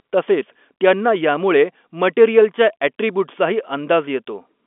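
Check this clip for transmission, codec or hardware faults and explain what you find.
No transmission, codec or hardware fault turns up anywhere in the speech. The G.711 telephone coding is audible as a narrow line band of roughly 250 Hz to 3.5 kHz, with nothing above about 3.8 kHz.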